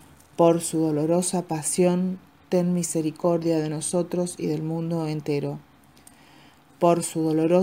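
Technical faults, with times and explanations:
No technical faults can be heard anywhere in this audio. There is nothing here that needs a time or an explanation.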